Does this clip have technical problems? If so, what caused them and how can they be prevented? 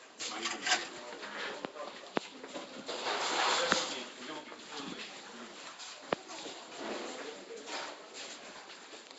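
Yes, a rough, hissy, smeared quality runs throughout with nothing above 7.7 kHz, likely Nellymoser compression starving weak bands and filling them with noise, consistent with roughly 32 kbps. Prevent it by recording and exporting with a modern codec like Opus or AAC, or keeping a lossless copy.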